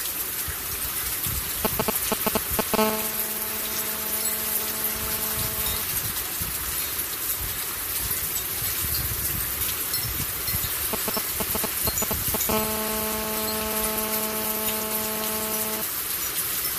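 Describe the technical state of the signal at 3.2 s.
GSM phone buzz covers 3.2 s, running from 2.78 to 5.82 s. A nearby 2G phone in a call transmits in bursts 217 times a second, and the audio circuit rectifies those pulses into a steady, raspy 217 Hz buzz full of harmonics, about 5 dB below the sound.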